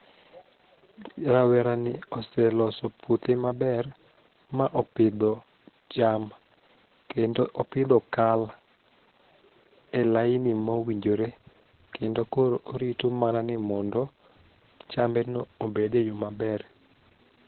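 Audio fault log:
Throughout: Opus voice compression, heavy damage. The speech has been squeezed to a very low rate, around 8 kbps, where the codec runs its SILK linear-prediction mode in narrowband: nothing survives above about 4.3 kHz, so consonants lose their crispness and the voice sounds muffled and boxed in. With so few bits, the excitation signal driving the predictor is coded coarsely, giving a hoarse, slightly robotic edge to every syllable.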